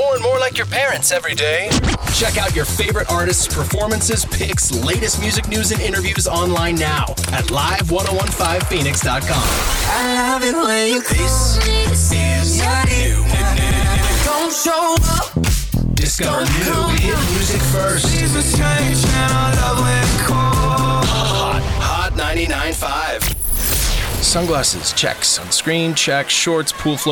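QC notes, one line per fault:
4.86 s, bit error spike: a single sharp tick peaking at about -16 dBFS, unrelated to the surrounding sound. One flipped bit throws the sample value off by a power of two and straight back, fitting a fault only a sample or two long. That instant jump spreads energy across the whole spectrum.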